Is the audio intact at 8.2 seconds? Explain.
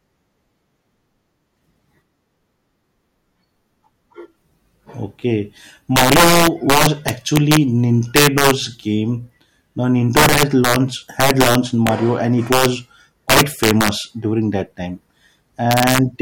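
No: integer overflow from 8.16 to 8.51 s, where peaks driven about 2 dB past the limit wrap to the opposite sign, cracking far more sharply than clipping would.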